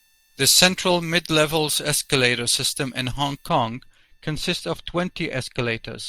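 From the start to 3.49 s, a treble boost applied for recording or transmission was never undone by the matching de-emphasis. This is pre-emphasis left on, with a shape that fits the 75 µs FM curve. Around 10 kHz sits about 14 dB above 1 kHz, so the speech sounds thin, glassy and hissy on sibilants.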